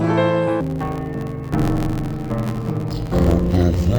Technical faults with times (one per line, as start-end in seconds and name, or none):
0.61-3.98 interleaved audio read as planar